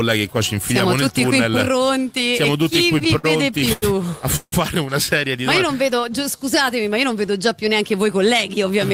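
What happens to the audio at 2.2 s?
Nothing goes wrong at 2.2 s; the audio there carries on cleanly, with no dropout, click or other audible fault.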